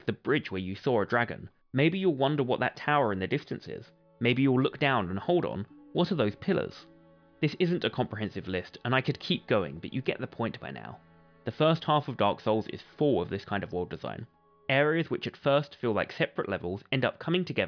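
No faults are audible anywhere in this recording.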